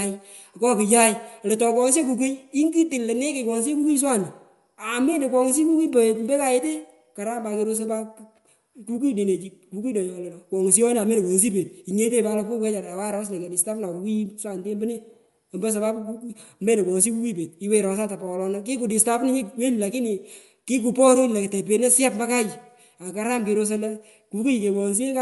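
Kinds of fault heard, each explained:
Bluetooth LC3 compression: The speech carries a breathy, grainy edge through the whole clip, with the upper spectrum thinned and partly replaced by noise. The damage is plainly audible. This sounds most likely like LC3 coding, which fits 10 ms frames at around 48 kbps.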